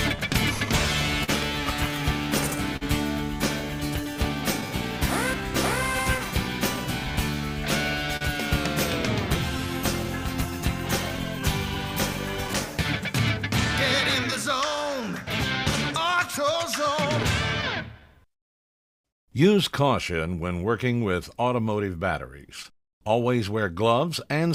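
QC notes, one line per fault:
Throughout: clock drift between sender and receiver. The sender's audio clock runs about 3 percent slower than the receiver's, so the receiver plays samples out faster than they arrive and the jitter buffer keeps draining. To avoid running dry it must keep stretching or repeating short pieces of the signal, and when it falls behind it briefly stalls. The result is small timing hiccups scattered unevenly across the whole clip instead of one clean, steady stream.
0.16–24.10 s: repeated timing corrections. Because the slower sender keeps underfeeding the buffer, the receiver inserts material again and again, always lengthening the audio, which fits a playback rate near 98 percent. Over the span these edits add roughly half a second. Each insertion is tiny and placed at irregular points, so the effect is a faintly uneven tempo and occasional slight hiccups rather than any single obvious glitch.
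1.24–1.30 s, 2.77–2.83 s, 8.17–8.23 s: short stall from a late packet. At each point a packet missed its playout deadline, the jitter buffer ran empty, and the receiver held the last sound going until data arrived, filling 41 ms, 45 ms and 41 ms respectively before resuming from the same spot. Nothing is lost, but each moment sounds briefly frozen or drawn out, with a faint buzzy sustain or small dip in level.
12.47–19.04 s: scattered short gaps. Across this stretch about seven isolated packets arrived late or not at all, and the receiver patched each hole by extending the preceding sound. The longest patch is about 20 ms, and together they total roughly 70 ms, around 1 percent of the span. The audio stays clear overall, but brief ticks, slight smears or tiny hiccups occur at those scattered points.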